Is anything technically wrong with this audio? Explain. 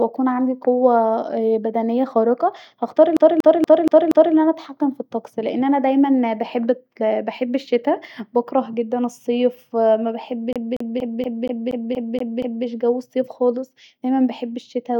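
Yes. The speech has a CD stuck on one turn twice, from 3.17 to 4.35 s, right after "بدنيه خارقه هختار" and before "انا اتحكم في الطقس", and from 10.53 to 12.66 s, just before "جو الصيف خالص دايما". A scratch knocks the laser back one track each revolution, so the same 237 ms slice repeats, five times in the first stretch and nine in the second, with a brief mute at every jump, giving a rapid, even stutter.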